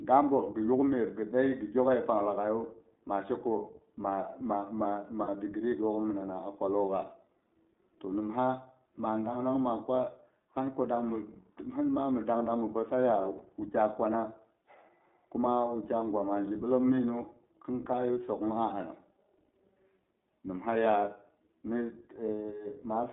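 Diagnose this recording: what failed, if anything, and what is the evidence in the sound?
Codec stage: the iLBC codec confines the speech to about 200 Hz to 3.7 kHz. Plainly rough, synthetic texture fits its 20 ms, 15.2 kbps mode.

Network stage: lost iLBC frames at 5.24–5.29 s and 13.38–13.42 s. The decoder repeats the last pitch cycle, giving brief buzzy held vowels that recover immediately.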